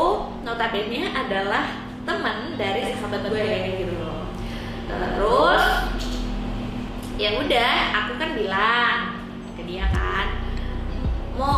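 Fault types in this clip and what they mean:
Doubled audio track: from 2.82 s to 6.88 s a second full-band copy of the sound runs about a tenth of a second behind the original, around 5 dB quieter, giving a flat, slapback-like doubling with no decay or room colour. The copy cuts in and out abruptly at those edges, which points to the likely cause: the same signal reaching the mix twice, once through a slower path or an edit holding two out-of-step copies.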